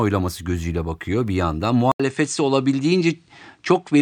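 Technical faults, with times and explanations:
1.92 to 4.02 s, input switched to a poorer device: after a silence of 80 ms at 1.92 s, the speech comes back duller, with nothing above 9.2 kHz, and a faint new background noise about 50 dB below the speech, while the loudness stays much the same. That pattern is likely from the recording changing to another microphone or a headset's call profile, whose narrower band and own noise floor then carry the speech to the end.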